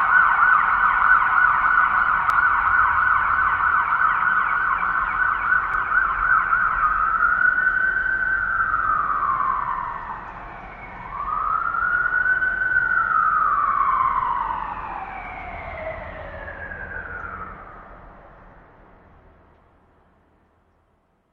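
At 2.30 s and again at 5.74 s, the compressed stream carries damaged data: a stretch of bytes no longer forms valid frames, so the decoder misreads what it finds, loses its place in the stream and has to hunt for the next good frame header before it can resume. Each time, that breakdown comes through as a short, sharp blip or squawk cutting across the sound, gone almost as soon as it appears.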